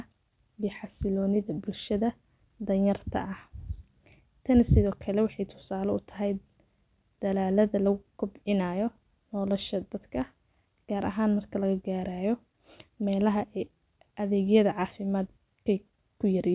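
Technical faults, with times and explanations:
No technical faults can be heard in this speech recording, and the signal holds steady with no breaks or disturbances in the transmission path.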